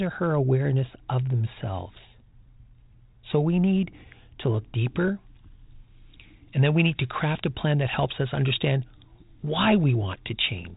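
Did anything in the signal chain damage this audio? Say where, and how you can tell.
Yes. From 4.78 s to the end of the clip the speech turns thin, bright and sibilant, the signature of pre-emphasis left on. The treble lift follows the FM 75 µs curve, reaching about 13 dB at 10 kHz relative to 1 kHz, so the fault sits at the de-emphasis stage: the boost applied for transmission was never undone by the matching cut. The G.726 coding underneath, band-limited near 3.8 kHz, shows only light damage.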